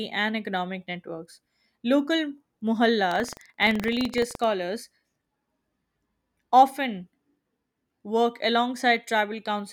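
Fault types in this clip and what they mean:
Buffer tearing: the writer and reader of a circular buffer have drifted and cross every period, splicing in a tiny slice of sound from about 150 ms earlier. It gives a 23.4 Hz rattle, fitting a 2048-sample buffer, seen as regular waveform steps and vertical spectrogram stripes.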